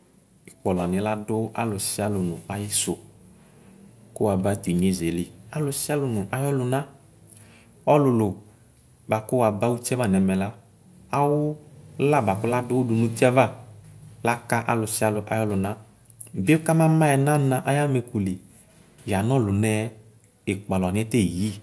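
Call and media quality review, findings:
No audible faults found on this speech recording.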